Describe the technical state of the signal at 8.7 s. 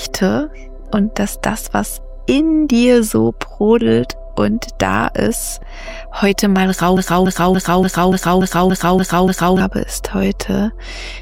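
At 8.7 s the signal is stuck in a broken-record loop: a fragment of about 0.29 s plays over and over, exactly the same each time and butted end to end, for nine repeats between 6.97 s and 9.60 s. The stutter has a rigid, mechanical rhythm, and whatever sound should have continued through that span never arrives. The likely cause is a stall in the player, encoder or stream, which kept resending the last fragment it held until playback recovered.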